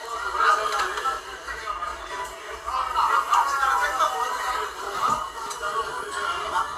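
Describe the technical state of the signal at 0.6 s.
At 0.6 s the signal is intact, with no audible fault in the sound at that moment.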